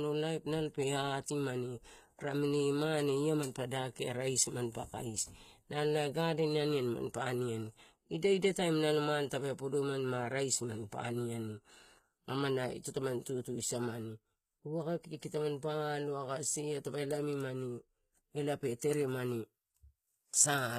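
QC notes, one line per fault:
Throughout, HE-AAC compression: the speech sounds clearly coded, with s sounds coming out gritty, lispy and a bit metallic, and nothing at all above about 14.9 kHz. That's likely HE-AAC at a very low bitrate, something like 20 kbps. Only the lower band is properly coded. The treble is rebuilt by copying lower bands upward under a rough envelope, so the top end stays bright, but its harmonics don't line up with the real ones.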